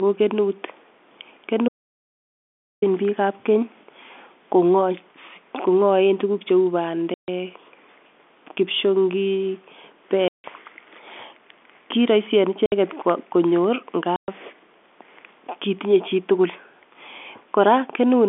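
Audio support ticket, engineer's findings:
Dropout to silence, 1.68 to 2.82 s, about 1.14 s. Speech cuts out mid-flow. Gap is silent, no room tone. Likely input-side loss (disconnected device, failed link or mute) while the encoder kept writing silence. Content in the gap is unrecoverable.

Packet loss filled with silence at 7.14 to 7.28 s (140 ms), 10.28 to 10.44 s (160 ms), 12.66 to 12.72 s (60 ms) and 14.16 to 14.28 s (120 ms). Hard-edged holes. All lengths are multiples of 20 ms, which fits 20 ms packets dropped in runs and replaced with silence instead of concealment.

G.711 A-law telephone path, band about 250 Hz to 3.5 kHz. Codec noise is faint or absent.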